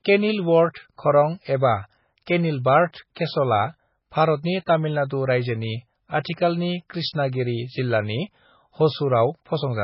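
From the start, the whole speech track has that heavy MP3 compression sound, likely from a very low bitrate encode, around 16 kbps. There's nothing above 5.5 kHz, so it's dull and muffled, and the starved frequency lines flicker in and out, giving a watery, swirly texture.

Then there's pre-echo at 0.74, 3.15 and 4.66 s. Each sharp onset lands late in a transform block, so the coding noise smears backwards by about 15 to 16 ms. You hear a brief hiss just before the attack, and the attack itself goes soft.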